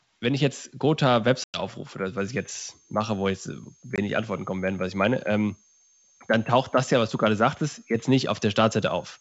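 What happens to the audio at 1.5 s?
Packet loss on an ADPCM call, 1.44 to 1.61 s: about 100 ms drops to hard-edged silence, then the desynchronised decoder brings speech back slightly distorted before settling.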